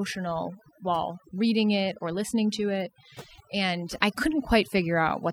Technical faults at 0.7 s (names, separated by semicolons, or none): overdone noise removal